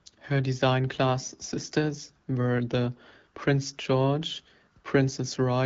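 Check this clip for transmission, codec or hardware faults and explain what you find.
Nothing here points to a transmission, codec or hardware fault; the speech comes through as you'd expect from an HD Voice call at 12.65 kbit/s, clear and with its top end stopping a little above 7 kHz.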